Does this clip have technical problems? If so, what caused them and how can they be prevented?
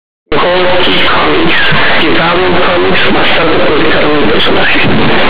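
Yes. From 0.32 s to 5.29 s the speech suffers from companded audio read as linear. Mu-law bytes are played as plain 8-bit samples without expansion, so each sign change swings across half the output range. Quiet and loud passages come out equally large, giving harsh, buzzy distortion with heavy noise in pauses. Prevent it by flagging the stream as mu-law and passing it through a G.711 expander before playback.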